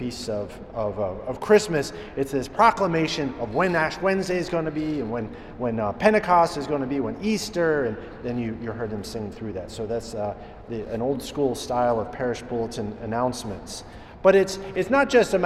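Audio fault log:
No faults heard.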